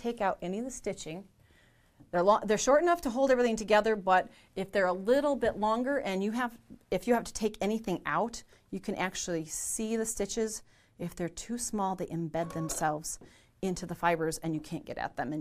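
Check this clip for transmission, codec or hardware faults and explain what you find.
No transmission, codec or hardware faults are audible here.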